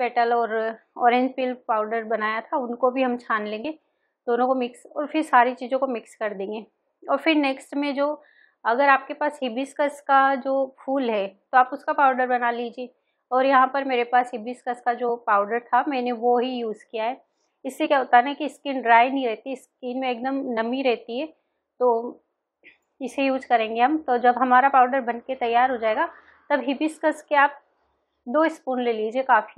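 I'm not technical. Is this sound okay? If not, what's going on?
No. There is damaged data in a compressed stream: bits of the file were corrupted, so the player briefly garbles, heard as short blips at 3.64, 15.08, 17.85 to 17.87 and 20.56 seconds.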